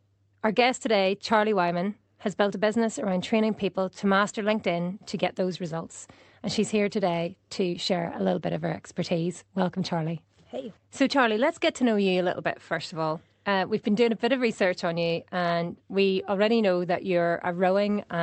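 Clock drift between sender and receiver runs through the whole clip of speech. The sender's clock is running about 3 percent slower than the receiver's, so audio arrives a little more slowly than it is played out. The jitter buffer keeps drifting toward empty, and the receiver has to keep stretching what it has to stay fed. The result is a faint, persistent sense that the pacing is not quite steady.

Repeated timing corrections occur from 0.10 s to 18.06 s, covering essentially the whole clip. To make up for the slow sender, the receiver keeps repeating short pieces of audio, always in the same direction and at uneven intervals. Together these repeats add roughly half a second and leave playback at 97 percent of its proper speed. Each repeat is small and, if heard at all, comes across as a slight hiccup or a dragging, uneven tempo rather than as a clear glitch. Through the Opus call path the speech stays limited to 8 kHz.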